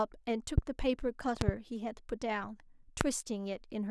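Loud pops at 0.58–0.60 s, a double at 1.41–1.51 s, and 3.01–3.03 s, likely voltage glitches. They show as tall waveform spikes and full-height spectrogram stripes, roughly 20–25 dB above the speech.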